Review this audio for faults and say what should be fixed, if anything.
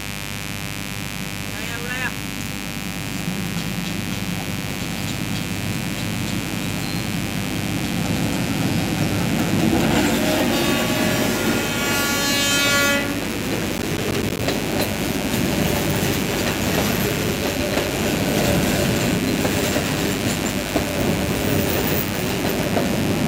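A mains buzz runs through the whole recording. Switching spikes on the 50 Hz supply put a raspy harmonic series roughly 10 dB below the signal. Prevent it with shielded cabling, proper grounding and isolation from dimmers or rectifier loads.

Processor overload crackle appears from 13.78 to 14.39 s. Missed processing deadlines leave a string of tiny silent gaps, which fits buffers of about 10 ms. Prevent it by reducing processing load or enlarging the audio buffer.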